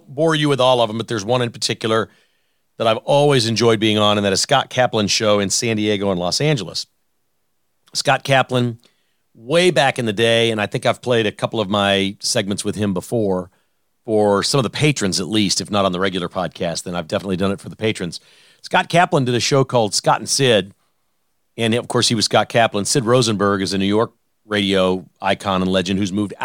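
Listening to this speech recording, nothing technical stood out as a problem.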